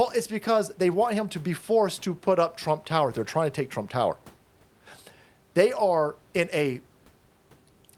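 No technical faults can be heard anywhere in this recording.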